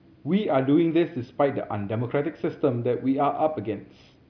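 No dropouts, clicks, distortion or other transport or processing faults can be heard anywhere in this speech recording.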